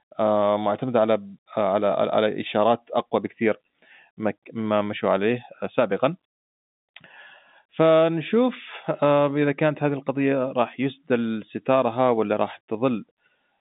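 Nothing stood out on listening to this telephone-band speech recording, which carries the narrow line character of G.711 telephone coding.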